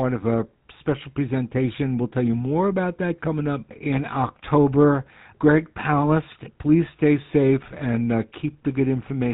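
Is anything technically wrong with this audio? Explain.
Yes. The speech carries GSM full-rate codec damage from start to finish. This codec models the vocal tract with a short filter and excites it with a regular pulse train that keeps only one excitation sample in three, so fine detail in the source signal is discarded. Nothing above 4 kHz gets through, which leaves the speech band-limited and dull. The result is a plainly audible buzzy, gravelly roughness on the voice, which fits the 13 kbit/s GSM full-rate coder.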